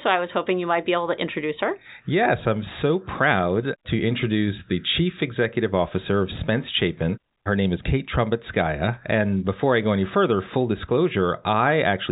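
No technical faults can be heard in this speech, which comes through the telephone path as expected.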